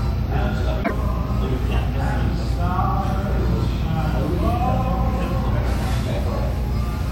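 A recording of everyday sounds, with one stretch of damaged data in a compressed stream from 0.80 to 0.91 s. For about a tenth of a second the decoder is fed corrupted bytes, misreads the frames, loses sync and has to hunt for the next valid frame header, so the passage comes out as a short squawk or blip. On a spectrogram this would show as an abrupt, blocky broadband patch cut off sharply at both edges, and the waveform would show a hard break at each end.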